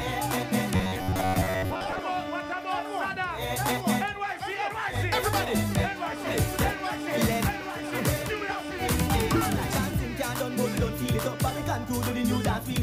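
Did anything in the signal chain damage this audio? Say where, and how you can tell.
Yes. From 0.76 to 2.03 s the sound turns into a rigid, metallic buzz at 93.8 Hz, the robotic sound from repeated short buffers. The likely cause is buffer underrun: missing audio filled by looping a segment of about 10.7 ms, replacing most of the real signal.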